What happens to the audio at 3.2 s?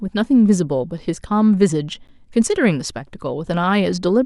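Nothing goes wrong at 3.2 s; the speech there carries on intact, with no dropout, click or distortion.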